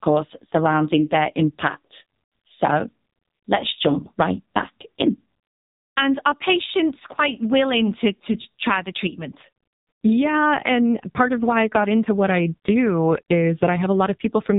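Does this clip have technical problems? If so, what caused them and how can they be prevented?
Yes, AMR narrowband mobile codec damage runs throughout: nothing above 3.8 kHz, plus buzzy, synthetic speech, pointing to a very low mode near 5.9 kbps rather than mere filtering. Prevent it by using a wideband codec or higher bitrate.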